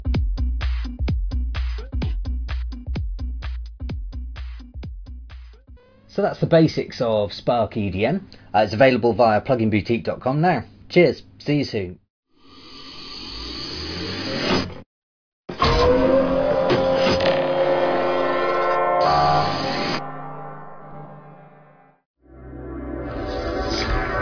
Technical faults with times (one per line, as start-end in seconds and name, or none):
none